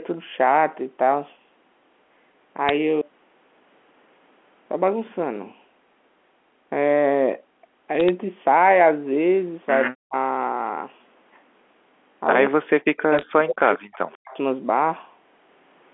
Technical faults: bit errors on a digital phone line; echo leak; speech suppressed in double talk

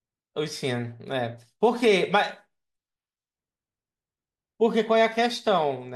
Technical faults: none

